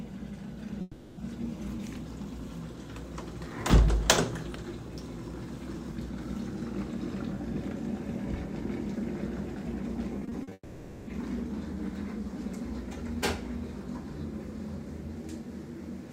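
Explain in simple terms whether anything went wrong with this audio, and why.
Yes, a couple of things went wrong, and both likely come from audio not arriving on time.

The first is a long network dropout, around 0.81 to 1.19 s. The sound suddenly smears into a fading buzz for about a third of a second, dips briefly to near-silence, and then picks up again with a chunk simply gone. The likely cause is the connection stalling so nothing reached the player, which stretched the last bit of sound to cover the hole.

Then from 10.19 to 10.53 s there's repeated packet loss, which gives that robotic sound. Five little holes come in quick succession, the longest only about 40 ms, and each one gets patched by repeating what came just before. With roughly a third of that stretch filled in this way, the sound turns choppy.

Straight after that, at 10.53 to 11.09 s, comes a second long network dropout, longer than the first at over half a second. 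Again the sound drags on as a fading buzz, goes almost silent for a moment, and then resumes with that piece missing.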